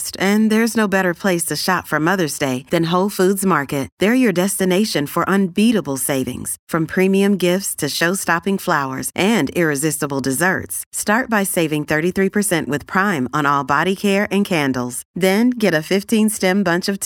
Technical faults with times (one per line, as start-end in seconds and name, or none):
none